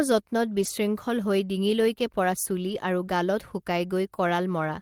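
At 0.53 to 0.71 s and again at 2.65 to 2.75 s, there is a lost packet rebuilt from error correction. The decoder filled each loss from a low-bitrate copy carried in the next packet. No gap opens, but the speech turns briefly rougher and noisier.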